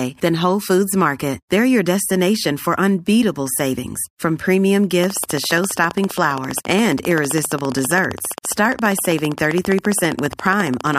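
Interference from nearby equipment or a faulty connection or power supply is likely injecting a train of clicks into this speech recording, starting just after "unbeatable savings from premium" at 5.04 s and running to 10.95 s: about a hundred evenly spaced pops, 14.9 per second, peaking roughly 10 dB above the speech.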